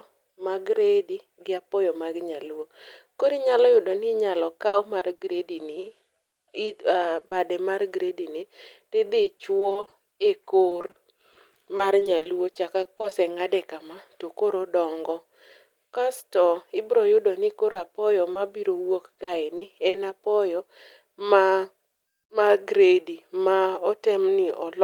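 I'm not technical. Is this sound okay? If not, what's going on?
No. At 4.67 s there is a burst of packet loss. About 60 ms of speech was lost, and the gap was covered with a fading held sound.

Short concealed packet loss causes brief smears or wobbles at 4.99 s, 5.17 s, 17.71 s (just after "ibiro yudo ni") and 18.33 s. Tiny pieces were lost and patched over.

Repeated packet loss makes the speech choppy and robotic from 6.27 to 7.33 s (ending at "mar gredini tidhi"), from 9.23 to 13.13 s, and from 19.13 to 19.95 s. Small gaps kept recurring and were patched each time.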